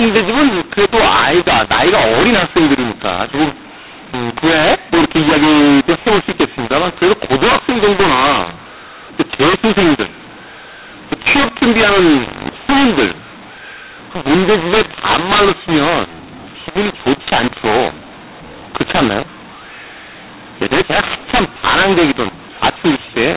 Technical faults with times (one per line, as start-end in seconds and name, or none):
0.00-23.36 mu-law and A-law mixed up